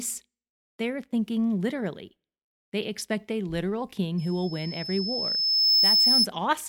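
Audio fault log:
4.18–6.27 s, loudspeaker feedback squeal: a single tone at 5.2 kHz rises out of the speech, swelling over roughly a second and a half until it sits about 10 dB above it, then stops at 6.27 s. The microphone is picking up the loudspeaker it drives, and at 5.2 kHz the gain around that loop exceeds one, so each pass reinforces the tone and it grows on its own until the loop is broken.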